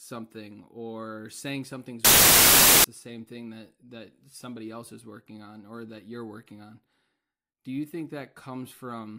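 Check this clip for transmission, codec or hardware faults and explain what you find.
There is one fault. From 2.05 to 2.84 s, samples built from the wrong bytes: misassembled bytes turn low bits into loud broadband hiss, not a dropout or clipping.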